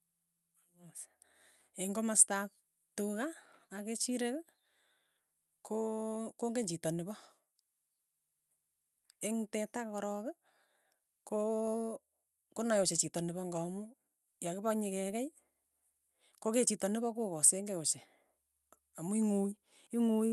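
The speech recording shows no technical fault, and its top end stopping near 12 kHz fits an Opus call path working as intended.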